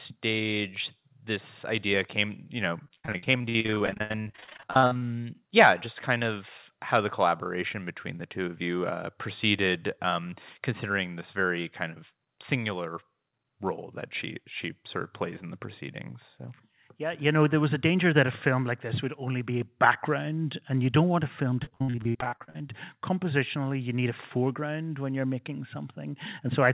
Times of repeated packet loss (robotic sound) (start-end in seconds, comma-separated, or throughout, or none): 2.84-5.03, 21.63-22.63